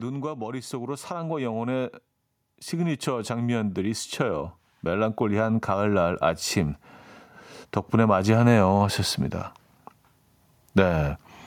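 From 0.69 to 6.86 s the voice and background swell together by about 12 dB: automatic gain rising, as the control judged the input too quiet and slowly raised it.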